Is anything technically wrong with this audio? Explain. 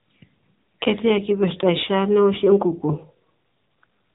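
Yes. Throughout the speech, the audio carries the AMR narrowband mobile codec signature. Nothing passes above about 3.8 kHz, so sibilants and consonant edges are dulled. The codec samples at 8 kHz and rebuilds speech from a vocal-tract filter excited by a few pulses per 5 ms subframe within 20 ms frames. The plainly audible buzzy, synthetic texture points to one of AMR-NB's lower modes, around 8 kbit/s, where too few pulses remain to model the voice faithfully.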